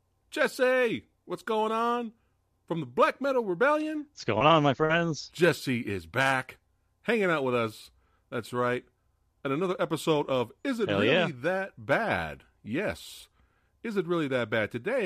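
Nothing in this speech recording stands out as a technical fault; the audio just runs along without any trouble worth pointing to.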